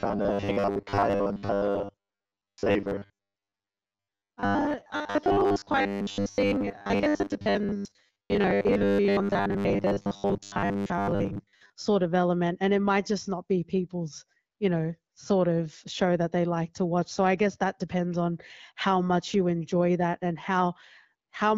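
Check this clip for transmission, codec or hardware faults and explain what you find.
One fault stands out. Robotic sound from repeated short buffers runs from 0.01 to 11.73 s, ending just before "sort of element and". New audio likely arrived too seldom, so a short chunk kept being replayed, filling most of that stretch. The loop forces a fixed 100 Hz buzz, which fits a 10 ms buffer, and the speech turns rigid and metallic while loosely following the words.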